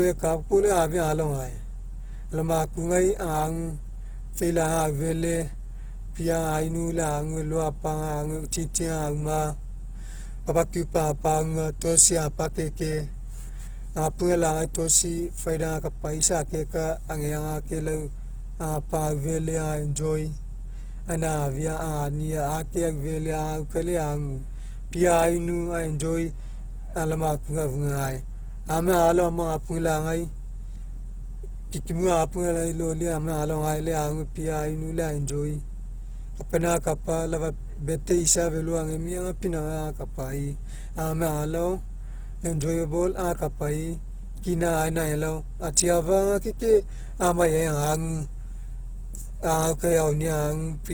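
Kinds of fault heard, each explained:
Opus compression: The speech has a grainy, rough texture running right through it, with tonal parts of the voice turning noisy instead of the watery swirl MP3 leaves, and that points to a likely cause in Opus coding in its music-style mode. The damage is plainly audible, which fits a low rate around 16 kbps, where the encoder fills starved bands with folded or noise-like content. Bandwidth hasn't narrowed, though; content reaches up to about 20.2 kHz.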